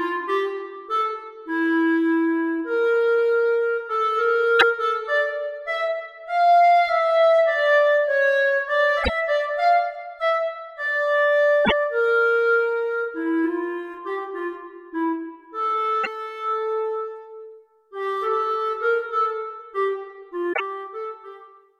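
Corrupted bytes in the compressed stream, damaged data in a compressed stream, repeatedly knock the decoder off its frame boundaries. Each time it misreads or rejects the affected frames and must hunt for the next valid header, so the audio breaks into a short chirp or squawky blip. This happens five times: 4.59 to 4.63 s, 9.00 to 9.10 s, 11.61 to 11.72 s, 16.03 to 16.07 s and 20.49 to 20.60 s. Each disturbance lasts roughly 40 to 110 ms.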